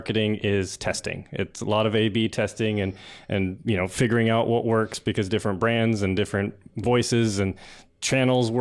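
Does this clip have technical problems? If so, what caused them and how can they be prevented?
No, no technical problems here.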